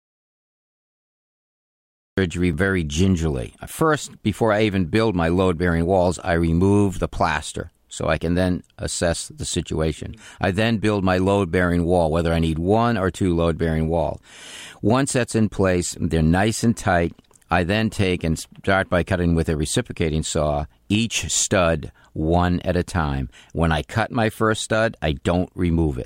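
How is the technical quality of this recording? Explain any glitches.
The recording has one clear glitch at the very start. Audio dropout to silence runs from the first instant to 2.18 s, with the speech cutting in mid-flow on "very gingerly". The input was likely lost, through a disconnected device or a stray mute, while the recorder kept writing silence. The gap is dead digital silence with no room tone, and whatever was said during it is gone.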